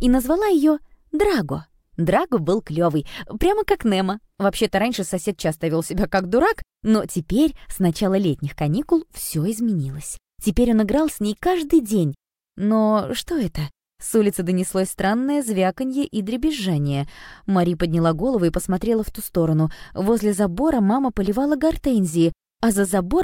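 No audible technical faults anywhere in this recording.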